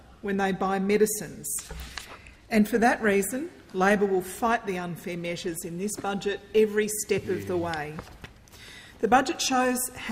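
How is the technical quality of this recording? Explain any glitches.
There is one audible glitch. From 4.99 to 5.04 s there is DAB burbling. Weak reception let a small number of bit errors slip past error correction into the MP2 data. Corrupted samples put short blips of noise in individual sub-bands, and corrupted scale factors make sub-bands jump in level for up to a frame. The result is a brief burst of burbling over the sound.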